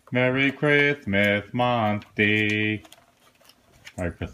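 No technical faults can be heard anywhere in the recording.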